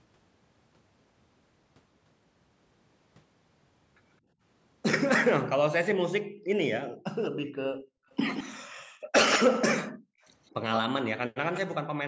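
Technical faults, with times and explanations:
4.24–4.38 s, 6.3–6.44 s and 7.72–10.22 s, background gated by the echo canceller: the room tone ducks hard whenever the far end's loudspeaker is active. There's a brief dip of about 19 dB first, then drops of about 40 dB, with the last stretch gated on and off for roughly a second and a half.
6.44–11.6 s, echo leak: there's a delayed copy of the voice trailing about 170 ms behind, only a little quieter than the main signal. That's likely the far side's echo canceller letting its loudspeaker pickup slip through and get sent back down the line.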